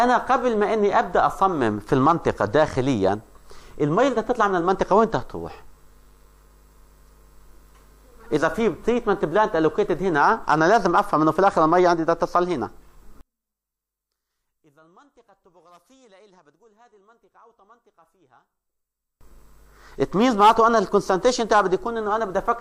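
From 13.21 s to 19.21 s the sound collapses to a faint remnant, about 36 dB down, for six seconds before returning at full level. This is the signature of one channel inverted: the likely cause is one stereo channel having its polarity reversed, so when the channels are summed to mono, everything common to both cancels. Centred material all but disappears, and only the small difference between the channels survives.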